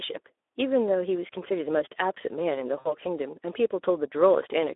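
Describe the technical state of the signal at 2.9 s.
At 2.9 s the signal falls inside a stretch of VoIP packet loss concealed by the speech codec, running from 2.79 to 2.93 s. About 60 ms of audio is missing, which fits three lost 20 ms frames. The decoder carries its last pitch and spectral envelope forward at falling gain, so the speech smears into a fading buzzy, coloured tone, and the voice stays weak or distorted for tens of milliseconds or more after packets resume.

Underneath, the whole clip carries plainly audible Speex codec damage at 11 kbps, confined to a telephone band of roughly 300 Hz to 3.6 kHz. With so few bits for the excitation, the voiced sound comes out hoarse and noisy, and the concealed segment is built from that already degraded model.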